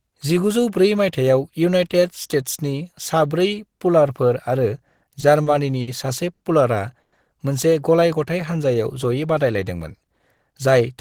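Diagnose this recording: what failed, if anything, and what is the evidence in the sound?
Speech drags and stutters from 5.10 to 5.88 s. Repeated stalls (stutter): late network packets emptied the jitter buffer four times, with 120 ms concealed and the longest gap 60 ms.

At 6.33 s one sound is held about 70 ms too long. A short stall from a late packet emptied the buffer, and the receiver stretched the sound until the packet arrived.

From 7.01 to 7.13 s, the last sound continues as a 110 ms buzz or hiss that never falls silent. This is a call audio freeze, likely packets held up in the network.

From 9.80 to 10.67 s, speech sounds hurried, about 7% faster at unchanged pitch. A jitter buffer speed-up cut pitch-period pieces totalling around 70 ms to reduce delay.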